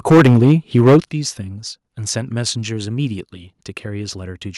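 From 0.1 to 0.97 s the speech is hard-clipped, with about 15 percent of samples flattened at the converter's limit, giving a harsh, crackling edge to the loudest syllables. This is likely microphone overload, with input gain set about 10 dB above what the converter can handle. At 0.12 s and again at 1.11 s the whole signal, voice and background together, drops abruptly in level, first by about 2 dB and then by about 9 dB. This is likely the microphone volume being stepped down automatically in response to the clipping.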